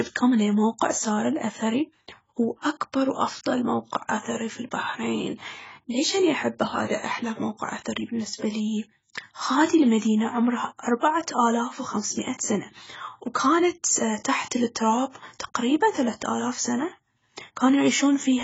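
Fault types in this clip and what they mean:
AAC compression: The speech sounds dull and smeared throughout. Sibilants and held sounds carry a warbling, fizzy texture. Nothing is heard above 7.6 kHz. The damage is heavy and likely comes from AAC-LC coding at a very low bitrate, fitting about 16 kbps.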